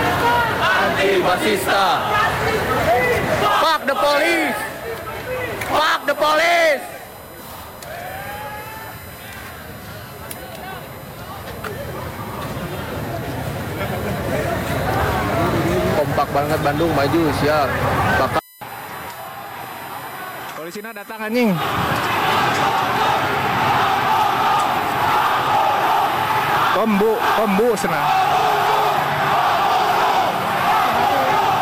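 All the way through there's USB whine, a steady 1 kHz tone from 1 ms bus frames leaking into power or ground, loudest at 12 kHz and sitting roughly 25 dB under the sound.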